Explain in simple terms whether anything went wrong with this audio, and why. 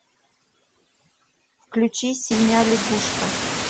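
Overdone noise removal, throughout: the cleanup was set too strong, so faint parts of the voice are scooped out with the background, with sparkly specks in the near-silence.

Noise suppressor artifacts, throughout: the suppressor keeps pushing down whatever it judges to be steady background, so noise dips between phrases and swells beneath them, especially once the room gets noisier at about two and a half seconds.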